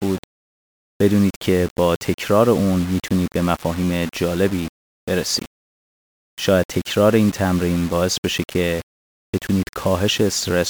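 From start to finish the speech carries grainy distortion that rises and falls with the voice, the mark of low bit depth without dither, likely coarse rounding near 5 bits. Unlike steady hiss, this error sits around 20 dB below the speech, tracks it, and sputters into silence in quiet gaps.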